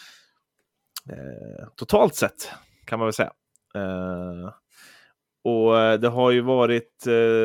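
Nothing in this speech recording stands out as a technical fault at any point, so there's nothing to flag here.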